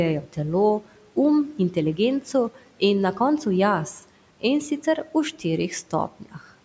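Speech recorded through call microphone processing shows speech cut by the noise suppressor twice, at 0.22 to 0.37 s and 1.54 to 1.76 s. The suppressor mistook quiet speech for background and pulled it down, by about 9 dB and about 7 dB. Those moments sound faint and swallowed.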